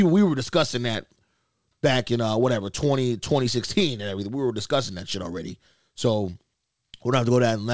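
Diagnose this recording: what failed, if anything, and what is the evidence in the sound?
Nothing failed in this speech recording, and no stage of the chain shows a fault. It came through a WebRTC call path, and the lack of any content above 8 kHz is the expected band limit of a wideband call codec, which fits G.722 at 64 kbps.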